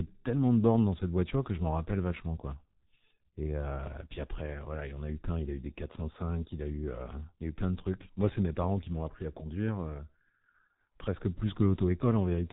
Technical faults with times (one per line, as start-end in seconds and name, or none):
0.00-12.52 G.723.1 codec